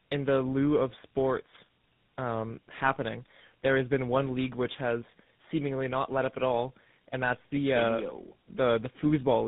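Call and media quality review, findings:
Tandem speech coding, throughout: rough, muffled, warbly speech; AMR-NB, CVSD, then GSM full rate, each recoding prior decoded output. Spectrogram: nothing above 3.8 kHz, smeared harmonics.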